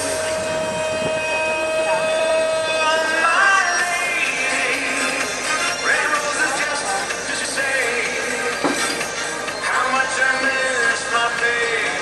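A garbled flutter, at 2.19 to 2.31 s and 7.28 to 7.45 s, is frames out of order: swapped blocks of about 52 and 78 ms playing in exchanged order.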